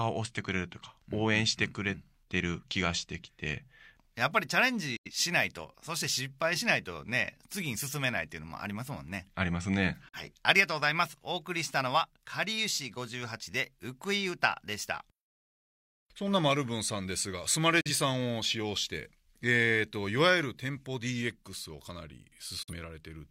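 A digital broadcast dropout recurs four times: the receiver lost valid frames and muted, fading out over about 8 ms. The speech drops into brief silence at 4.96–5.11 s (the longest hole), 10.08–10.18 s, 17.81–17.90 s and 22.63–22.73 s, and whatever was sent in those gaps is gone.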